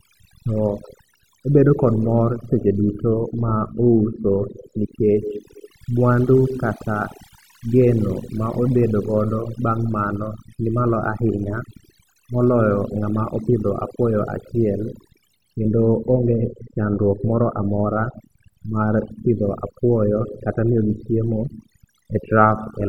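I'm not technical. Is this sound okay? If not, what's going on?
No. Overdone noise removal runs through the whole clip. A cleanup tool set far too strong switches off sound it mistakes for background noise, taking quieter parts of the speech too, so the background drops and breaks up into twinkling.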